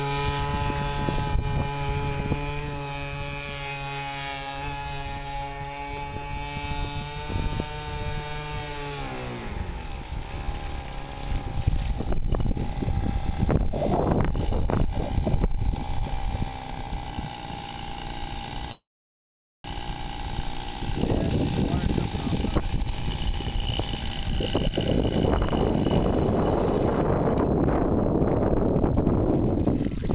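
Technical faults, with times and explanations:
18.71–19.65 s, call audio freeze: the sound stalls for a bit under a second. The last bit of audio gets stretched into a short fading buzz, then about 0.82 s of silence, and then it picks up right where it left off. That's likely packets getting held up in transit until the jitter buffer ran dry, so the receiver had to invent filler. Nothing's actually lost; a gap of roughly 0.93 s was inserted instead, and everything after it lands that much later.
21.56–24.73 s and 29.65–30.13 s, jitter buffer speed-up: the audio rushes along at the same pitch, about 113% speed in the first stretch and about 123% in the short one at the very end. This is the buffer working off that built-up delay by snipping out lots of tiny pitch-period-sized pieces back to back. It trims something like 0.4 s in the first run and around 0.1 s in the second, which is why it feels hurried rather than shifted in pitch. 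The band-limited sound, with nothing above 4 kHz, fits a narrowband call codec carrying it all.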